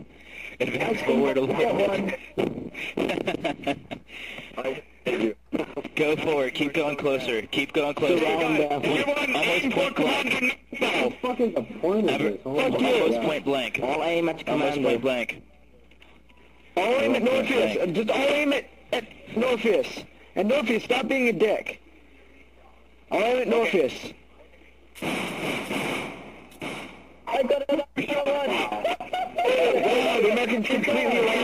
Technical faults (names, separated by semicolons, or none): none